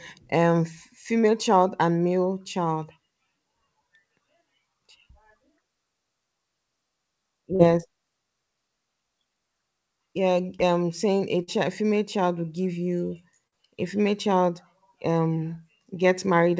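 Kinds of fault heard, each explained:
Short concealed packet loss: at 7.56, 11.43 and 13.47 s, about 40 ms of audio failed to reach the decoder in time. The receiver extended the preceding sound across each gap, then blended back into real audio, leaving brief smeared or wobbling patches.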